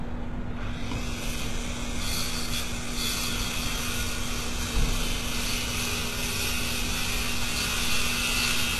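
From start to finish the treble sounds gritty and metallic, out of step with the sound beneath it, and stops dead at 12.3 kHz. The likely cause is heavy HE-AAC compression, fitting a bitrate near 16 kbps, which rebuilds the upper bands from lower ones. A spectrogram shows a hard ceiling over smeared, repeated-looking texture.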